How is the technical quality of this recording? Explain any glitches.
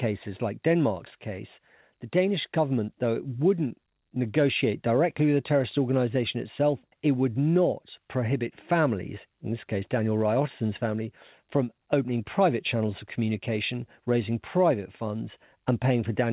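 The technical quality holds up with no glitches to explain, only the narrow bandwidth of the call codec, which leaves nothing above 4 kHz.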